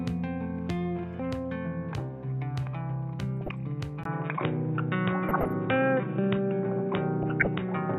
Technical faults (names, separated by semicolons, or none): DAB burbling; input switched to a poorer device